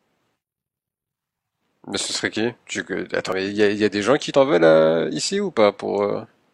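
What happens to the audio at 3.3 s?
At 3.32 to 3.35 s the speech has an overlap between stream segments. Two adjacent segments, which appear to be about 1 s long, carry overlapping time stamps, so the player trims roughly 27 ms of sound that was never duplicated. The waveform jumps there, producing a brief skip.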